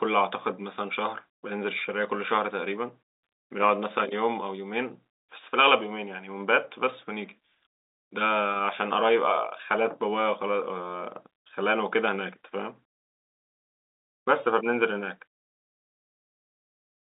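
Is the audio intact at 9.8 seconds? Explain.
Yes, at 9.8 seconds the audio is intact, with nothing audible beyond the steady telephone-band sound of the G.711 line, which carries nothing above about 3.8 kHz.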